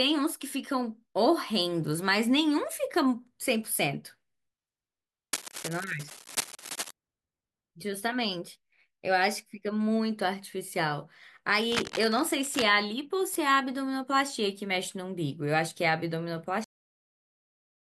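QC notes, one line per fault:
5.33–6.91 s and 11.72–12.63 s, cable scratch noise: Two bursts of dense, irregular crackle and rustle sit over the speech, about 1.6 s and 0.9 s long, at roughly 10 dB below the speech. The noise is ragged and uneven rather than steady hiss, and the speech underneath continues. The likely cause is a worn cable, connector or control being moved, with its contact resistance fluctuating rapidly and modulating the signal path for the duration of the movement.
16.64 s, cut-off end: The speech stops abruptly mid-sound at 16.64 s and drops straight to digital silence, with no natural decay or room tail. The silence continues to the end of the file. The abrupt stop and dead silence indicate that the final stretch of audio was never written or played out, so the recording was truncated while sound was still present rather than ending on a pause.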